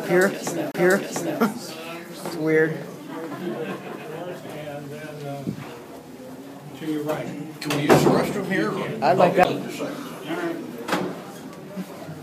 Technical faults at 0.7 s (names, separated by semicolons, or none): CD skip